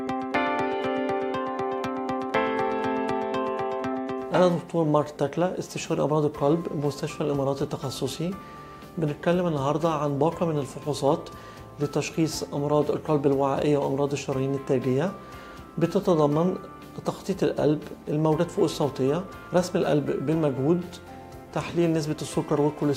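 No technical faults can be heard anywhere in the recording. The sound runs on without any audible break or defect from the opening moment to the last.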